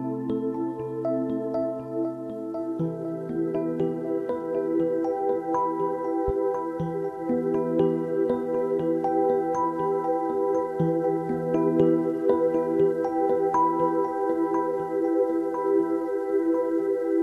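At 6.28 to 6.32 s a single loud pop stands a few dB above the signal, likely a voltage pulse; unlike a dropout, the sound continues underneath.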